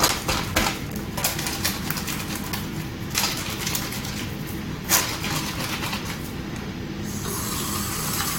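Brief glitches cut into the sound at 1.16, 3.14 and 6.18 s, each a blip shorter than 20 ms. They come from damaged data in a compressed stream: corrupted bytes made the decoder misread those frames and lose sync until the next valid header.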